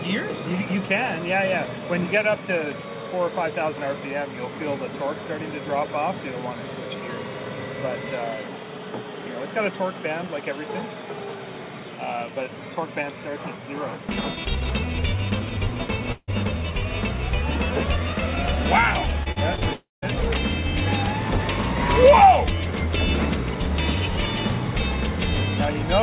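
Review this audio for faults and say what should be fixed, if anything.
At 16.12–16.30 s and 19.73–20.04 s, the sound smears into a fading buzz, then goes silent and resumes further on. This is likely a long network dropout that lost about 0.16 s and 0.3 s of audio.

From 19.24 to 19.63 s, the audio turns choppy and robotic, with four short holes of up to about 41 ms each. This is repeated packet loss, with about a quarter of that stretch patched by stretching the preceding sound.

Throughout, nothing above 4 kHz comes through, which fits a narrowband telephone codec.

To prevent both faults, use a steadier network link with less congestion, along with forward error correction or redundancy, so lost packets can be recovered instead of concealed.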